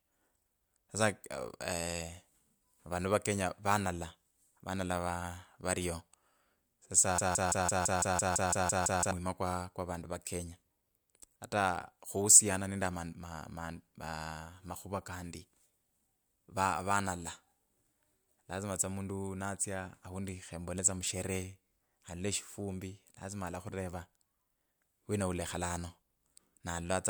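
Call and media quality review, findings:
Broken-record loop, 7.18–9.11 s: a 168 ms fragment of speech repeats 11 times back to back. Likely player, encoder or stream stall re-sending the last held buffer; the underlying audio for that span is lost.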